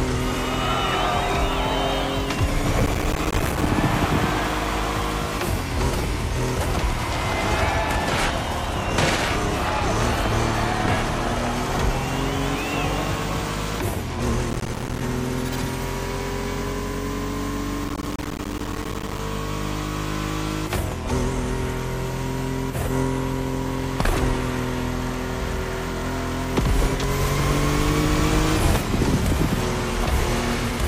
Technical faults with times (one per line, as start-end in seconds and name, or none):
2.80-3.69 processor overload crackle
14.51-15.01 processor overload crackle
17.85-19.19 processor overload crackle